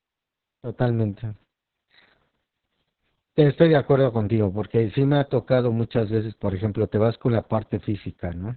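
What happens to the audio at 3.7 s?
At 3.7 s the speech carries Opus voice compression, which runs through the whole clip rather than starting there. The coder's linear-prediction mode has dropped to narrowband and codes the excitation coarsely, which points to a very low bitrate of around 6 kbps. The speech sounds muffled, hoarse and faintly robotic. On a spectrogram, energy stops sharply at about 4.4 kHz and the harmonics look smeared and blotchy. The waveform looks ordinary.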